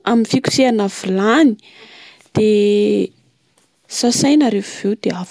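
No technical faults can be heard in the speech at any point.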